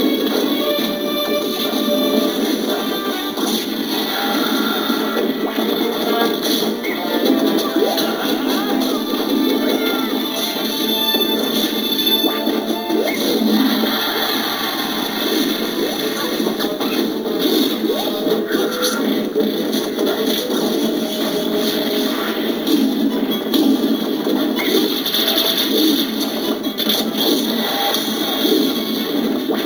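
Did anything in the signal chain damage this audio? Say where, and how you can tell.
Yes. Imaging from sample-and-hold upsampling runs throughout, from sample-rate conversion. Raising 16 kHz to 48 kHz by repeating samples without smoothing mirrors the spectrum into 8 to 16 kHz at about -15 dB, heard as a metallic fizz that tracks the sound's level.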